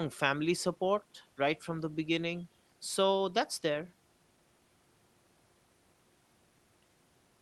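No faults to report: the speech carries the usual call-codec coding with the top end stopping at about 12 kHz, and the room noise sits about 39 dB below the speech.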